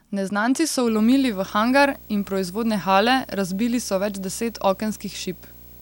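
A speech clip with video or display buzz from 0.87 s to the end: a 59.94 Hz field-rate buzz with hash, plus a 15.7 kHz line tone, roughly 20 dB under the speech, from a screen or video cable coupling in.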